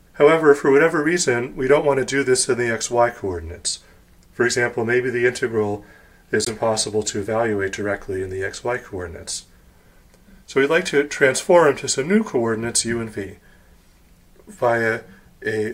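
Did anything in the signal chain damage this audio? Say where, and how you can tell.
Yes. The wireless link to the headphones appears to have failed briefly, most likely a Bluetooth dropout in which an audio packet arrived too late and was discarded. At 6.45 s the output cuts to silence, and the sound returns at 6.50 s. The material after the gap carries on as though it had kept playing rather than picking up where it stopped. The missing audio amounts to about 15 ms, which fits a single lost frame.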